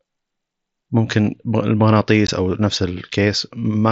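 At 2.27 s the speech drops out for about 15 ms, unconcealed Bluetooth headset packet loss. Audio between headset and phone never arrived, which fits two lost frames, and silence or an idle pattern filled the gap with no repair. It is heard as a brief hole with abrupt edges. The waveform shows a gap with hard edges, and the spectrogram shows a thin vertical stripe. The surrounding speech carries the light graininess of the mSBC link.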